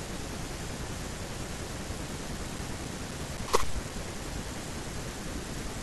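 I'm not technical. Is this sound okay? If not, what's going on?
No. Between 2.06 and 4.42 s the speech has CD scratch ticks: ten brief, evenly spaced ticks, about four a second, each only a few thousandths of a second. Unlike random crackle, they keep a steady beat, one per turn of a scratched disc.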